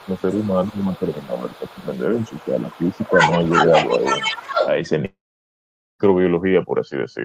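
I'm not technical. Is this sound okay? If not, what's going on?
No. From the start to about 4.69 s a second voice, nearly as loud as the main one, runs underneath. That is the other side's voice leaking through, likely because the echo canceller missed it.

At 0.05 to 0.21 s, 0.47 to 1.85 s and 2.18 to 3.17 s the main voice dips or fades in pieces. This is speech suppressed in double talk, likely because the canceller turned both voices down.

From 5.05 to 6.01 s the sound fades into most of a second of near silence, then resumes with that stretch gone. That points to a long network dropout, likely lost audio.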